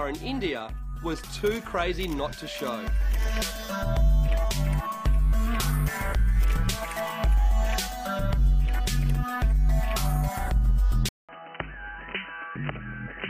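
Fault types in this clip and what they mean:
Input switched to a poorer device: the input likely moved to a narrower device at 11.09 s; after a 200 ms gap, the sound loses its upper range, drops about 5 dB, and gains new background noise about 30 dB below the signal.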